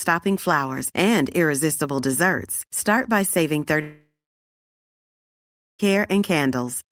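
At 3.81 s, right after "by saving", the speech gives way to a buzz or hiss that fades within about a quarter second, then silence until 5.81 s, when speech resumes with roughly 2 s missing. This is a long network dropout, likely from incoming audio stopping while concealment briefly extended the last sound.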